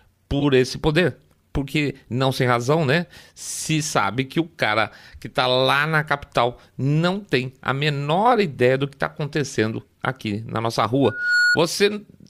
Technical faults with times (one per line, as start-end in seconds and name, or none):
0.40-0.44 corrupt frame decoded
11.04-11.58 loudspeaker feedback squeal
11.91-11.94 corrupt frame decoded